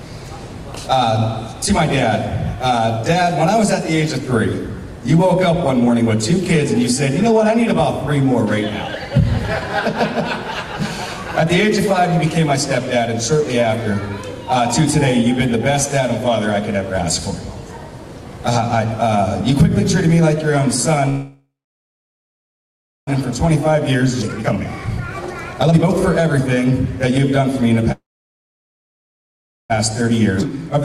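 At 21.09 s there's a call audio freeze that runs to 23.09 s. The last bit of sound gets stretched into a short fading buzz, then about 1.6 s of silence. Packets were likely held up and the jitter buffer ran dry. When the audio comes back it carries on right where it left off, so nothing's lost, but roughly 2 s of extra delay is now built in.

From 23.47 s to 27.83 s you get a jitter buffer speed-up. The receiver is clawing back that backlog by snipping out tiny pitch-period slices over and over. Playback runs about 22% fast with no change in pitch, so it sounds rushed, and around a second gets trimmed overall.

Inside that stretch, at 24.22–24.24 s, there's a skip ahead. Something like 0.7 s is dropped outright and the two sides are butted together almost seamlessly, so it just lurches forward.

A second call audio freeze hits at 27.92 s and lasts until 29.72 s. Same deal: a brief tail, then about 1.7 s of silence, again likely from stalled packets. 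It adds roughly 1.8 s of delay without losing anything.

Another jitter buffer speed-up follows from 30.01 s to 30.78 s. This one is milder at about 6% faster, trimming only around 50 ms.

During that second speed-up, at 30.41–30.43 s, there's another skip ahead. This time something like 1.5 s vanishes, with a near-direct splice across the jump.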